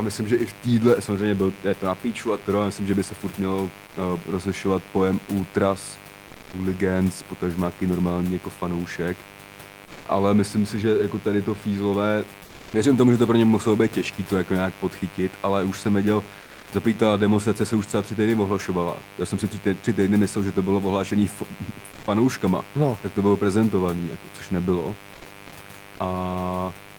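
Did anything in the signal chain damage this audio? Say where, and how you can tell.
Yes. In the analogue wiring, a mains buzz runs through the whole clip: a steady, raspy 50 Hz buzz whose harmonics reach well into the kilohertz range, sitting roughly 20 dB below the speech. The rasp comes from sharp switching spikes, twice per mains cycle, entering the line through a dimmer, rectifier or poorly shielded cable. That produces a dense harmonic series rather than a pure hum, and it lies on top of the room noise captured at the microphone.

At the codec stage, comfort noise in place of the background appears in five short pauses: 6.31–6.49 s, between "uh rozlišovat pojem ultras" and "hooligans potažmáky normální jako"; 9.85–10.03 s; 12.43–12.73 s, after "jako tady to fízlové"; 16.45–16.63 s, after "ale už jsem věděl"; and 21.91–22.03 s. For 120 to 300 ms the textured background turns into flat, featureless noise, shifting by about 2 dB at 9.85 s and 21.91 s. 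This is likely Opus discontinuous transmission, with the receiver synthesising noise while the sender is silent.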